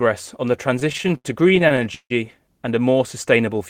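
Right after "on the", from about 0.79 to 2.12 s, there's a run of repeated stalls (stutter): eighteen short hold-ups, the longest 154 ms, filling roughly a third of that stretch. Packets were arriving late, so the jitter buffer kept running dry and the last sound was stretched out, faded on the longer waits, until "and a more". Nothing's lost, but it drags and stutters.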